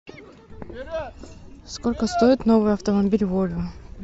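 Speech, with no technical faults heard anywhere in the clip.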